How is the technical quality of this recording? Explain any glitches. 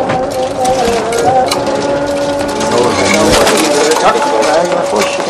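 The technical quality is compromised by hard clipping across the whole recording. The signal is driven about 10 dB past what a stage can pass, so its peaks are sliced flat. Only a small fraction of samples, around 2 percent, hit the ceiling, which adds high harmonics as crackle on loud moments. Unlike gentle saturation, the distortion is abrupt and gritty rather than warm, and it appears only on peaks.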